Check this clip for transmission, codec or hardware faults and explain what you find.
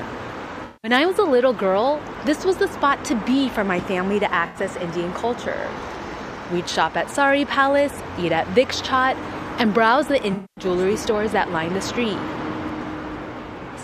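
One fault is present: AAC frame loss with concealment, occurring three times, at 0.64 to 0.91 s, 4.46 to 4.58 s and 10.33 to 10.64 s. The gaps cover about 192, 85 and 235 ms of missing audio, each pointing to a run of consecutive lost frames. The decoder covers each gap by extrapolating from the last good spectrum, scrambling signs or interpolating energy, so the affected stretches sound smeared, noisy or phasey instead of cutting out cleanly.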